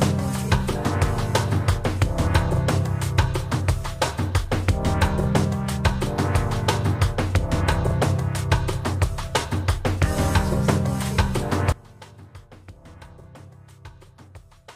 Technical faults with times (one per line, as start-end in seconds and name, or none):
11.72-14.76 one channel inverted